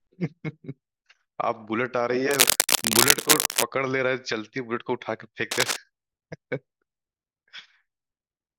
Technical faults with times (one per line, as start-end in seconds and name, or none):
2.31-3.63 cable scratch noise
5.51-5.76 cable scratch noise